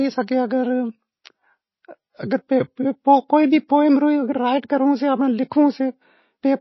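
Speech runs the whole way through with plainly audible MP3 compression damage, most likely from a very low-bitrate encode, something in the region of 24 kbps. Nothing comes through above about 5.8 kHz, because the encoder chops the treble off at a fixed point when it's short of bits. The weaker spectral detail it keeps flickers in and out between frames, which gives that watery, swirly texture, and the consonant attacks come out smeared rather than crisp.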